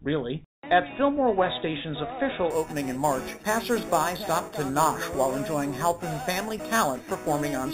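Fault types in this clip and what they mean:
Imaging from sample-and-hold upsampling: from about 2.5 s to the end, samples sound simply repeated up to 44.1 kHz with no smoothing, which fits an 8 kHz original. Mirrored spectrum copies add a metallic fizz about 14 dB down, lowest copy spanning 4 to 8 kHz.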